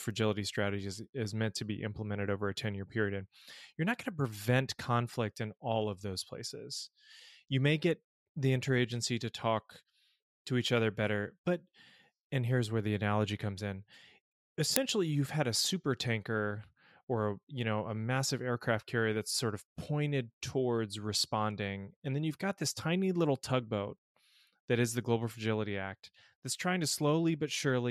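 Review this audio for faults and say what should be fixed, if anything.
At 14.76 s, just before "you've had a super", an uninitialised buffer plays: a single loud crack lasting about 1.45 ms, which fits a 64-sample block being sent to output before any speech was written into it, so stale memory was heard as samples. Zero-fill every buffer on allocation and only hand it to the output once it holds valid audio.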